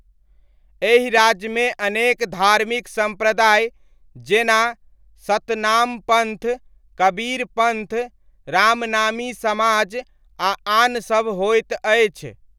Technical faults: loud pop

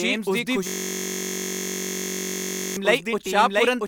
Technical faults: doubled audio track; system hang loop

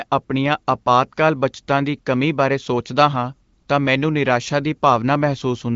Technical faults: none

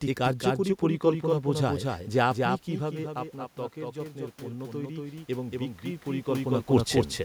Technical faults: doubled audio track; automatic gain rising

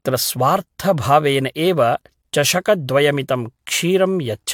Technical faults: generation loss

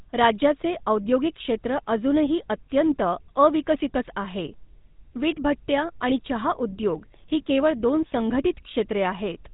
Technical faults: GSM full-rate codec

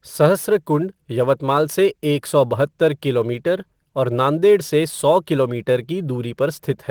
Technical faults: sample clock jitter

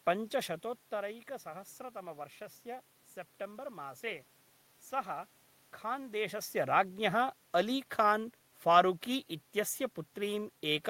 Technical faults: none

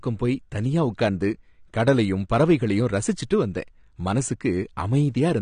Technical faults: AAC compression

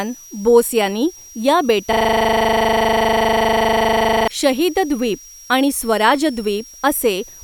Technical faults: switching supply whistle; system hang loop

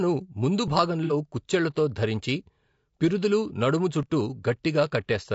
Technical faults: low-delay AAC compression; AAC frame loss with concealment

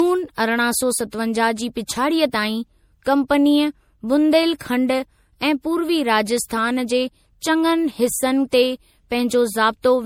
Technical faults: generation loss

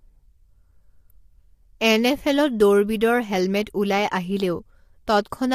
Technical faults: low-delay AAC compression

